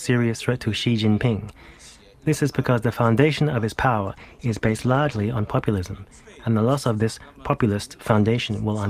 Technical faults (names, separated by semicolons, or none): call bitrate drop